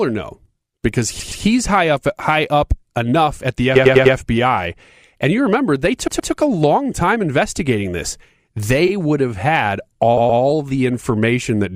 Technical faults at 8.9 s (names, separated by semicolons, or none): repeated frames